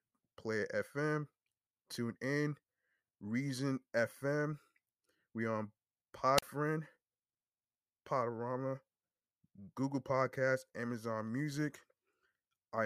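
A speech recording with a brief burst of hiss at 6.37 s, then near silence for about 39 ms until 6.42 s: a wireless microphone squelch dropout, the radio signal fading until the receiver muted.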